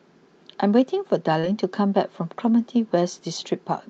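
At 1.39 to 1.46 s the speech briefly smears, a short stretch where the sound seems to hang and wobble before blending back. This is short concealed packet loss: about 40 ms of audio never arrived in time, so the receiver invented roughly 37 ms by extending the preceding sound and then crossfaded into the real signal. The call path's band limit near 8 kHz, which fits an Opus-style call codec, is present throughout.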